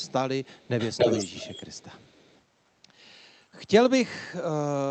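From 0 to 0.13 s a very faint echo leak trails the speech, then from 0.44 to 2.41 s it returns nearly as loud, a distinct copy 292 ms behind, likely a loudspeaker echo the far end's canceller missed. A separate repeat, unlike reverb's smeared tail, all within the call path's 8 kHz band.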